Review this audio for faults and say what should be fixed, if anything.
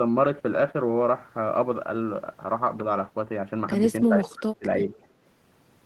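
Between 4.02 and 4.83 s the speech dips in pieces, for about half a second in total and by roughly 25 dB at its deepest. This is likely speech suppressed in double talk: an echo canceller mistook overlapping talk for echo. On a spectrogram the energy thins or gaps out; the waveform shows sudden narrow troughs.

From 4.95 to 5.07 s a faint repeat of the speech returns 306 ms late, very quiet at roughly 35 dB below the main level. This is likely echo leak, where the far-end loudspeaker's sound reached its microphone and wasn't fully cancelled. A spectrogram would show a weak, delayed copy of the preceding speech pattern.

Better double-talk detection, a well-adapted echo canceller and a headset or less loudspeaker volume at the far end would prevent both faults.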